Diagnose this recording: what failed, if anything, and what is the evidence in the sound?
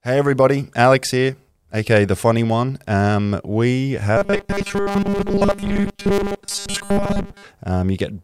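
From 4.17 s to 7.45 s the speech turns into a rigid, metallic buzz at 200 Hz. It still roughly tracks the words. This is robotic sound from repeated short buffers, most likely at the driver or buffer stage. New audio arrives too slowly, so the software fills the gaps by replaying the last stretch, and the real audio is skipped. A 200 Hz buzz fits a repeated slice of about 5 ms. Roughly 70% of the sound in that span is repeated.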